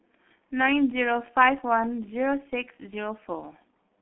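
G.723.1 codec damage runs throughout the speech. The audio is confined to a narrow 200 Hz to 3.4 kHz telephone band, with nothing above 3.4 kHz. Heavy low-rate coding, consistent with roughly 6 kbit/s, leaves it muffled and hoarse, with smeared consonants.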